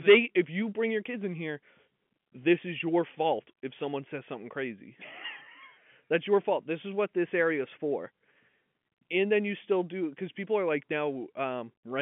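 Nothing goes wrong here: the speech just has the narrow feel of an ordinary landline call, with the telephone band running out at about 3.7 kHz, which is simply how a working G.711 line sounds.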